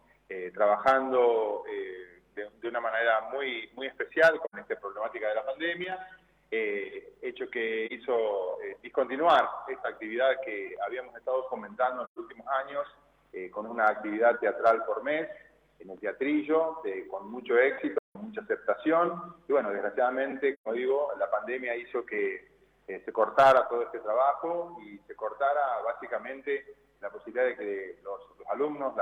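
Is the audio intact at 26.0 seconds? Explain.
Yes, the audio is intact at 26.0 seconds, with no dropout, click, distortion or other fault audible at that moment.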